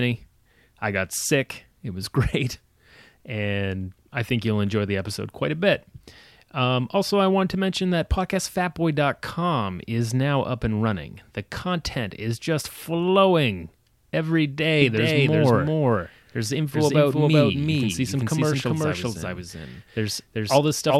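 After "is just flowing every" (14.8 s), a doubled audio track runs to the end: an equally loud copy about 0.4 s behind, likely a slower second capture path.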